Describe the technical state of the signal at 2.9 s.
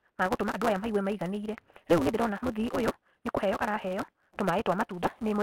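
At 2.9 s, as throughout, a block size mismatch (truncated) drops each block's tail, so the speech runs 1.88 times fast at near-normal pitch, with a 172 Hz buzz.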